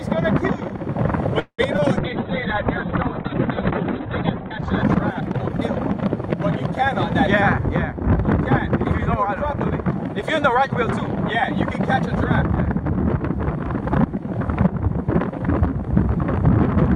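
A call audio freeze at 1.39 to 1.60 s stops the audio's forward motion: the last sound is stretched into a fading buzz for about 190 ms, the final 80 ms of it silent, and then the audio resumes from exactly where it left off, with nothing lost but now running 190 ms later. The likely cause is packets held up in transit, leaving the jitter buffer empty until they arrived. Right after, at 1.76 to 1.80 s, short concealed packet loss leaves a brief smear. About 20 ms of audio never reached the decoder in time, and the receiver patched the gap by extending the preceding sound for 17 ms before blending back into the real signal. A call bitrate drop follows from 1.99 to 7.67 s. The bandwidth estimate collapsed and the encoder fell from 128 kbps to 8 kbps, sitting at the lowest rate for 2.6 s. At that rate the coder quantises coarsely and narrows the band from 20 kHz to 4 kHz, so the sound turns muffled and rough, losing its top end until the rate recovers. 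Three jitter buffer speed-ups then speed the audio up at unchanged pitch. From 7.67 to 8.01 s it plays at 110% speed, trimming around 40 ms. From 8.85 to 11.73 s it runs at 103%, trimming about a tenth of a second. From 12.76 to 14.19 s it again runs at 103%, trimming around 50 ms. Each time, the buffer had built up more audio than it targets, as happens when delayed packets arrive together. The receiver worked the delay back down by cutting out short pitch-period-sized pieces many times in a row, which shortens the timing while leaving the pitch where it was.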